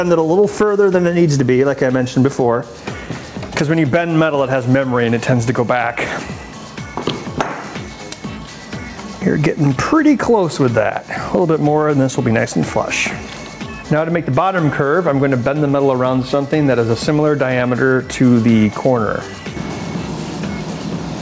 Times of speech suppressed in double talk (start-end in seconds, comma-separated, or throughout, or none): none